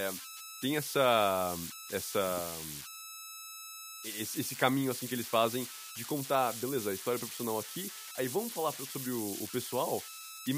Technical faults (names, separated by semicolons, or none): converter idle tones